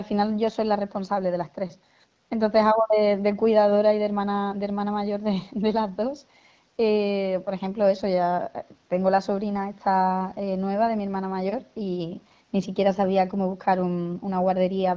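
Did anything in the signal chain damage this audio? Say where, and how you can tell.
No, nothing in the signal chain damaged this speech. It carries the narrowed bandwidth of a call path, with no content above about 8 kHz and the light coding texture typical of an HD Voice AMR wideband call at a mid rate such as 12.65 kbit/s, which is normal for that route.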